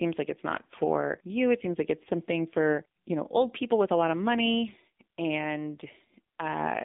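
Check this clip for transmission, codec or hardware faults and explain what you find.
One fault runs through the whole recording: the speech has passed through the AMR narrowband mobile codec. From start to finish the sound is confined to a 200 Hz to 3.7 kHz telephone band. A speech model rebuilds the voice from a handful of pulses per short sub-frame, and at a bitrate that fits AMR-NB's 7.4 kbps mode the damage is plainly audible as a buzzy, synthetic edge. A spectrogram shows a hard, flat ceiling at 3.7 kHz with nothing above it and a thin floor below 200 Hz. The waveform looks ordinary.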